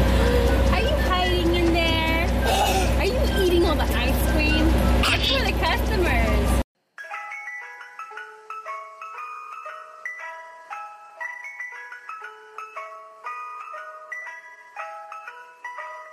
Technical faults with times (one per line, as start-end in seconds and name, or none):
none